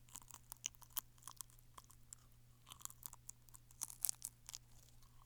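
No technical faults can be heard in this recording of sounds.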